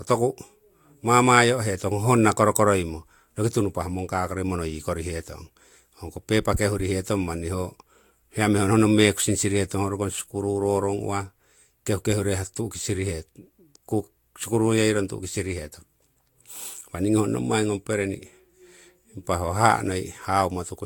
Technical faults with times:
0.00-20.86 generation loss

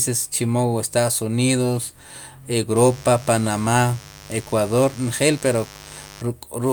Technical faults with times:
2.76-6.22 mains buzz

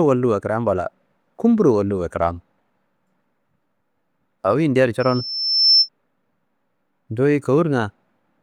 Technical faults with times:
5.00-5.89 loudspeaker feedback squeal

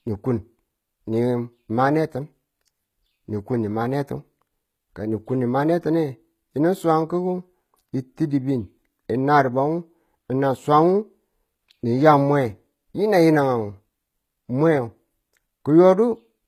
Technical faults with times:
0.00-16.48 HE-AAC compression

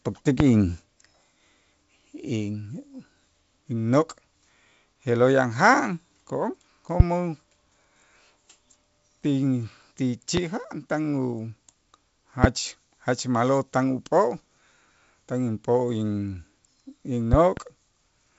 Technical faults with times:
0.40-0.43 loud pop
7.00-7.03 loud pop
10.37-10.40 loud pop
12.44-12.47 loud pop
17.33-17.60 loud pop

